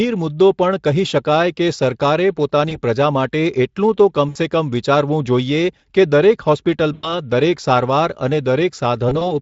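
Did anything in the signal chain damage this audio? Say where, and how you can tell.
Yes, at the network stage: VoIP packet loss concealed by the speech codec, Speex here. Stretched, fading extrapolated sound appears at 2.69–2.82 s after "કહી શકાય કે સરકારે", at 4.29–4.37 s after "પ્રજા માટે એટલું તો", at 6.93–7.18 s after "વિચારવું જોઈએ કે દરેક", and at 9.09–9.31 s. The decoder stretched its last pitch and filter over gaps of 20, 60, 100 and two separate 20 ms losses, and the damage lingers past each gap.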